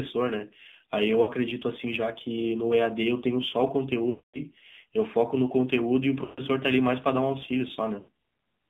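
Throughout the speech, the AMR narrowband mobile codec confines the sound to roughly 150 Hz to 3.7 kHz and gives it a plainly buzzy, synthetic quality. It re-synthesises the voice from a vocal-tract model and a sparse pulse excitation, at a rate that points to the 7.4 kbps mode.

Sample clock jitter is also present the whole way through, on the order of a microsecond or two of timing wobble. Because the error scales with waveform slope, a faint rough hiss, about 45 dB below the signal, rides on louder and brighter passages and disappears in pauses.

Lost AMR speech frames interrupt the audio four times: 1.22 to 1.30 s (60 ms), 4.10 to 4.40 s (240 ms), 6.24 to 6.42 s (140 ms) and 8.00 to 8.09 s (80 ms). In each gap the decoder keeps repeating its last good pitch and vocal-tract settings while lowering the gain. The short gaps come across as drawn-out sound fading away. The 240 ms gap, which fits about a dozen consecutive frames, stretches into a smeared tone that fades out before the speech returns weak and rough.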